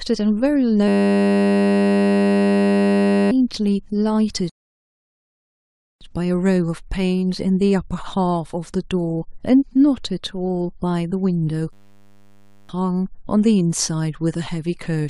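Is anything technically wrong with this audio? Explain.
Yes, there are two kinds of problem in this speech clip.

From 0.88 to 3.31 s and again from 11.73 to 12.69 s there's a system hang loop. The system froze while the hardware kept replaying a 10 ms buffer, giving a steady 100 Hz buzz. About two seconds and about one second of speech are lost.

From 4.50 to 6.01 s there's a rebuffering stall. Playback ran dry and went silent for about 1.5 s, then picked up exactly where it stopped, so nothing's missing but time is added.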